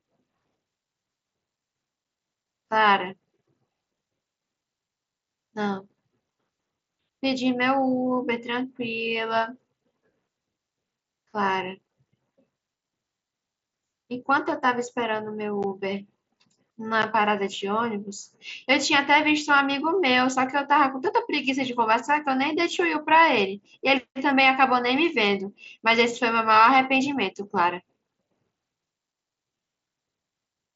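At 15.63 s and 17.02 s, a buffer likely went unfilled, leaving a block of digital silence about 11.6 ms long, which fits a 512-sample buffer. The speech drops straight to silence and back, heard as a brief tick.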